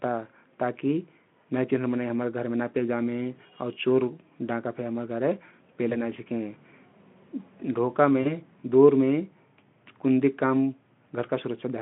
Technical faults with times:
5.89-5.98 VoIP packet loss concealed by the speech codec
8.21-8.39 VoIP packet loss concealed by the speech codec

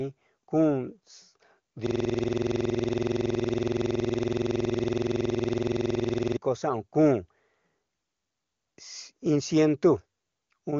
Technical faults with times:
1.86-6.37 system hang loop

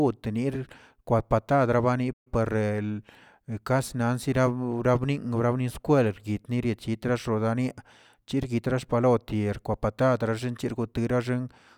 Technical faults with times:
2.13-2.27 playback stall

